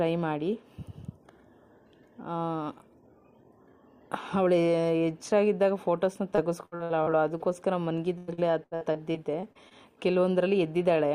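From 6.35 to 7.42 s, repeated packet loss (robotic sound) sets in. Seven short gaps, the longest 63 ms, are patched by stretching the last sound. It turns choppy, with pieces missing. It recurs from 8.18 to 9.73 s with nine gaps, up to 97 ms.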